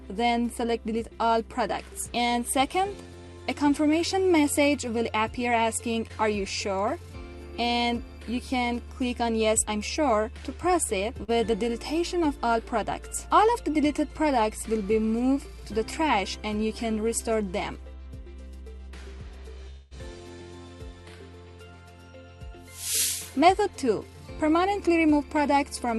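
A call recording passed through an Opus-style codec whose top end stops near 12 kHz. Short concealed packet loss shows up as brief smears at 6.07–6.12 s and 11.24–11.30 s, where roughly 21 ms and 44 ms of audio were synthesized from the preceding sound. From 19.70 to 19.93 s the audio turns into a fading continuation of the last sound for about 0.2 s, then resumes with about 15 ms of audio skipped. This is likely a long network dropout, concealed without reaching silence.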